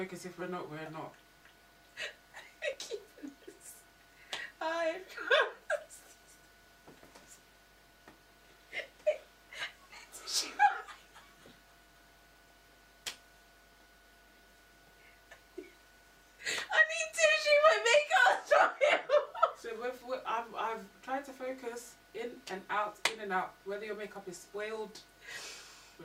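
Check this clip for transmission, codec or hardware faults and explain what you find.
No faults detected.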